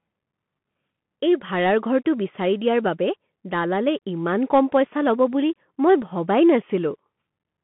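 A speech clip carrying the Bluetooth CVSD headset codec for its whole length. The band runs from about 150 Hz to 3.4 kHz, with nothing above 3.8 kHz, which fits a 64 kbps CVSD headset link. CVSD codes each sample as a single up-or-down bit with an adapting step. Fast, loud high-frequency content outruns that step and distorts, so s sounds come out scratchy over a granular hiss. The damage is plainly audible throughout.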